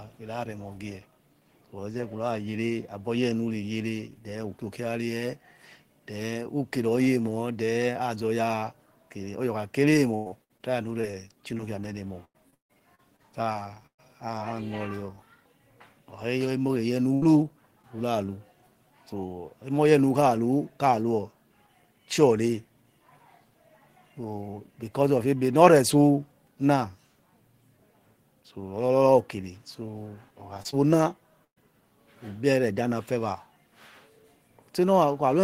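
From 10.15 to 11.61 s and 12.25 to 14.0 s, repeated packet loss gives choppy, robotic speech. Gaps up to 151 ms are patched with repeated sound. At 17.14 s, a burst of packet loss drops 80 ms. The last sound is held and fades before speech resumes. At 17.82 s, a short concealed packet loss of 20 ms leaves a brief smear. From 30.54 to 30.74 s, four small gaps return the robotic chop. At 31.44 s, another burst loses 120 ms, mostly heard as silence.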